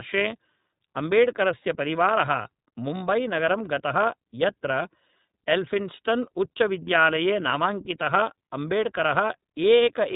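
From start to finish the speech carries the sound of the iLBC codec, a narrowband VoIP coder. Nothing gets through above about 3.8 kHz, so sibilants and breath lose their top end and everything sounds boxed in. The damage is plainly audible: each 30 ms frame's excitation is coded on its own, which leaves a slightly rough, synthetic edge, and the grain fits the 13.33 kbps mode.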